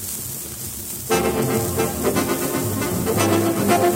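At 2.73 s the output briefly failed to deliver samples, most likely because the program did not fill its buffer in time, leaving a block of digital silence about 2.2 ms long. The audio drops to zero and back with no fade, so the gap is heard as a single tick.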